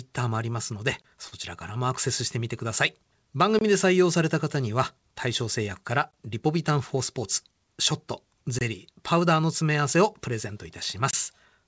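Speech here, and it has a few timing faults. There's a gap between chunks about every 2.5 s: 23 ms holes at 1.02–1.04, 3.59–3.61, 6.11–6.13, 8.59–8.61 and 11.11–11.13 s, probably where each block of audio starts playing a little late. At 1.28–1.35 s there's a short stall from a late packet: the jitter buffer ran dry, so the last sound gets held about 38 ms too long with a slight buzz or dip, then carries on without losing anything. From 6.76 to 7.61 s you get a jitter buffer speed-up, where the receiver snips out tiny pitch-period slices to catch up. That makes things run about 5% faster at the same pitch, shaving off around a twentieth of a second, and it sounds a bit hurried. The call path itself tops out at 8 kHz, which fits a G.722 setup at its usual rate.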